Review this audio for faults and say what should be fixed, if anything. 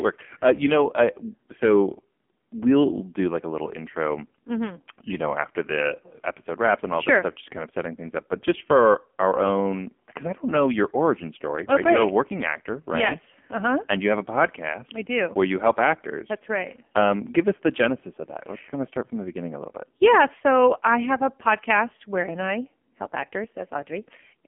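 Buzzy, synthetic speech with nothing above 3.5 kHz throughout: heavy AMR narrowband mobile codec damage, consistent with a low 5.9 kbps mode. Record over a wideband or direct connection rather than a narrowband mobile call.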